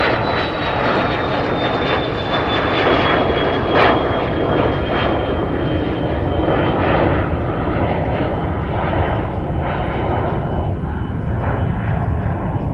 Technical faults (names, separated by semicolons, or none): skip ahead; jitter buffer speed-up